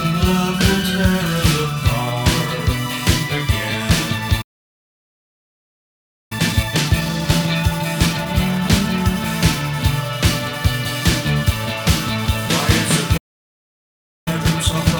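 At 4.41 s the sound cuts out in mid-flow. This is a playback stall. The output stays silent for about 1.9 s, until 6.32 s. The likely cause is the player running dry of data or its thread being blocked. When the sound returns at 6.32 s, it runs hurried. This is time-compressed catch-up. From 6.32 to 9.32 s it plays at 1.15 times normal speed. Pitch stays put. The player trims small pieces and cross-fades the joins to clear its backlog.

At 13.17 s a second playback stall hits. Silence lasts about 1.1 s, to 14.28 s. A starved buffer or blocked thread is again the likely cause. Catch-up follows from 14.28 s to the end. This time it runs at double speed. The rush is much more obvious. Pitch still holds.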